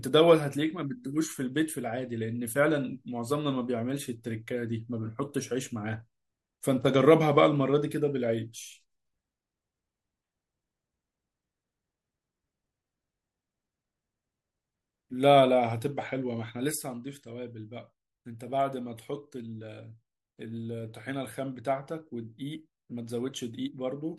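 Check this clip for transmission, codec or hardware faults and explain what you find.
One fault is present: one channel drops out. From 16.72 s to the end at 24.19 s, the speech suddenly falls by about 6 dB and stays there. The likely cause is one stereo channel going silent. When the mono sum averages that silence with the surviving channel, shared content halves in level, and anything carried only by the lost side vanishes.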